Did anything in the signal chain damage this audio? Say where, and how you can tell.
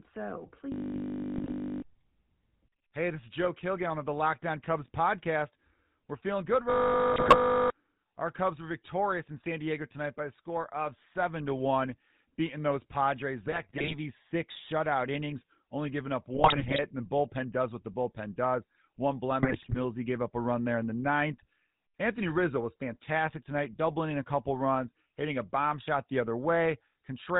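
Yes. The GSM full-rate codec damage runs through the whole speech clip: nothing survives above 4 kHz, and a buzzy, gravelly roughness sits on every syllable. That points to 13 kbps GSM full rate, which drives a vocal-tract model with sparse, regularly spaced pulses instead of the real waveform.

A system hang loop appears from 0.72 to 1.82 s and again from 6.7 to 7.7 s. Each is a steady 50 Hz buzz, because one 20 ms piece repeats exactly while the driver stalls and the hardware keeps cycling its ring buffer. Roughly a second of audio is lost each time.

GSM bit errors fall at 1.36 to 1.53 s, 7.12 to 7.35 s, 13.46 to 13.94 s, 16.34 to 16.83 s and 19.42 to 19.79 s. They sound like squawks, pops and gargling. Corrupted filter, pitch and gain values from a weak radio link are distorting the spectrum and level frame by frame.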